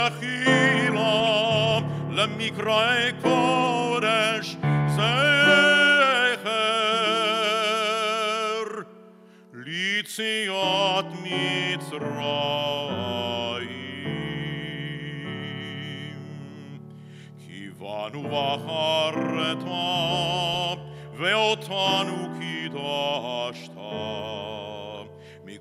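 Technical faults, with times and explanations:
1.2–1.71 s, 9.77–9.82 s, 20.54–20.64 s and 24.95–24.98 s: DAB burbling. Short bursts of burbling sit over the sound, longest in the first half-second event. Bit errors at a low rate, around a tenth of a percent, slip past the error correction into the MP2 audio data. Corrupted samples put short blips of noise in single sub-bands, and corrupted scale factors, where they get through, make sub-bands jump in level for up to a frame.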